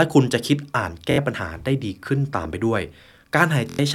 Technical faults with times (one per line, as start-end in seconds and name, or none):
1.11-1.18 Bluetooth stutter
3.70-3.79 Bluetooth stutter